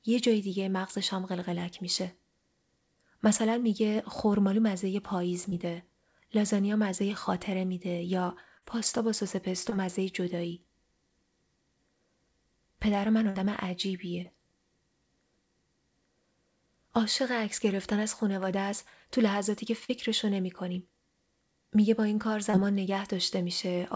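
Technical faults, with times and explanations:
5.50–5.54 s, 8.58–8.64 s, 9.70–9.73 s, 14.23–14.27 s, 19.85–19.91 s and 22.51–22.55 s: short concealed packet loss. Each time a small chunk of the call arrived too late to decode, roughly 20 ms at most spots and 40 ms at 8.58 and 19.85 s. The receiver papered over the hole by stretching the previous bit of audio and easing back into the real signal. You hear a quick smear or wobble.
13.29–13.37 s: burst of packet loss. Here about 60 ms went missing in one go. The concealment kept the last sound going for around 50 ms while turning it down, so you get a brief held buzz or fading hiss before the audio picks up further along, with that slice simply gone. It sits on a call path with nothing above 8 kHz, which fits a wideband codec such as G.722 at 64 kbps.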